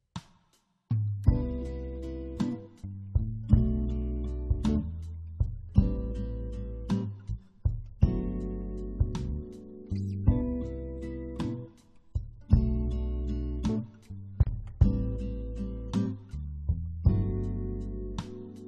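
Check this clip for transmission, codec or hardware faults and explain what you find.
One fault is audible, a gap at a join of encoded pieces. At 14.43 s the sound drops out for about 35 ms, ending at 14.47 s. The edges are smeared by the codec, and the sound resumes exactly where it stopped. The clip was encoded in separate pieces and joined without trimming, so the encoder's start-up delay and the padding on the last frame of the earlier piece both remain as silence.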